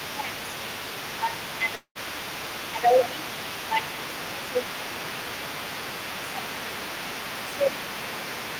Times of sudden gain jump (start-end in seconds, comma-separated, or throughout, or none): none